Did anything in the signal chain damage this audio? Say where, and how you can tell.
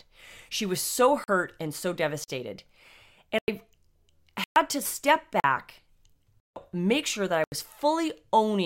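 Yes. Blocks of digital silence cut the speech at 1.24, 2.24, 3.39, 4.44, 5.4, 6.4 and 7.44 s, each lasting 40 to 160 ms. The sound drops straight to silence and back with no fade, which points to a driver or buffer underrun.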